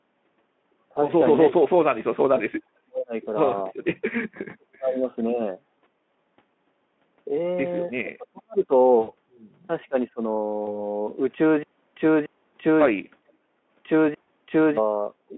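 From 1.48 to 3.13 s, 4.43 to 5.41 s and 7.89 to 8.71 s the speech dips by as much as about 40 dB. This is speech suppressed in double talk, likely from an echo canceller ducking the talker while the far side spoke. At 8.99 to 9.12 s an 80 ms gap, which fits four lost frames, turns into a buzzy tone or coloured noise that fades. This is VoIP packet loss concealed by the speech codec, which extrapolates from the last pitch rather than simply dropping level. Further double-talk dips follow at 9.89 to 10.2 s, a shallower cut of about 20 dB, and at 13.24 to 13.54 s, about 40 dB. Shorter concealment smears occur at 10.65 to 10.75 s, from about 20 ms lost, and at 14.22 to 14.27 s, from about 60 ms lost. These are brief, unlike the longer, gated drops of suppression.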